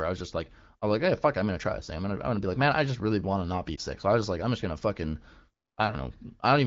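A speech clip carried over AMR wideband (HD Voice), with the light coding character of a rate near 16 kbit/s. There is one case of lost AMR speech frames, from 3.76 to 3.80 s, just after "want to not be". The sound briefly dips or wavers there. The decoder had no valid data for that moment. It repeated its last pitch and vocal tract settings at lower gain. The short gap fits a single lost 20 ms frame.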